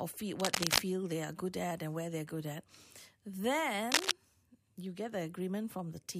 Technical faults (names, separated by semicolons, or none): cable scratch noise